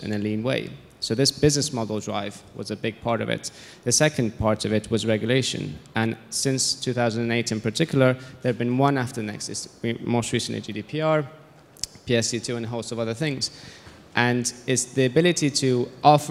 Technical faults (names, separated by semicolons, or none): none